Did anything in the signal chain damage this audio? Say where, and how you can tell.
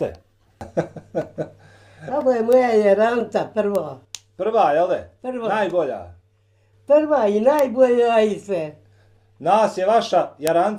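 Yes. Four bit error spikes from a memory or digital-link stage: sharp broadband ticks at 2.53, 3.75, 7.59 and 10.47 s, about -6 dBFS then about 0 dBFS. A flipped bit throws one sample (two at 10.47 s) by a power of two, then straight back.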